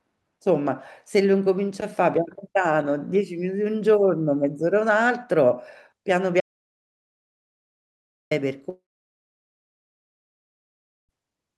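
From 6.41 to 8.31 s the speech cuts off abruptly into dead digital silence with no room tone, an audio dropout to silence lasting about 1.9 s. The likely cause is a lost input or stray mute while recording continued. Unlike a network loss, nothing fades in the gap.

From 8.69 to 11.11 s a long network dropout removes about 2.4 s of speech. The last sound is stretched into a buzzy tail that decays over roughly a tenth of a second before silence, which points to a receiver concealing packets that stopped arriving.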